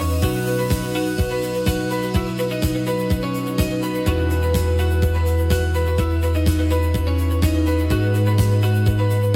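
Right through the clip there's channel delay with comb filtering: one side lags around 10 ms, so the mono sum notches out from about 50 Hz upward, leaving everything hollow and phasey.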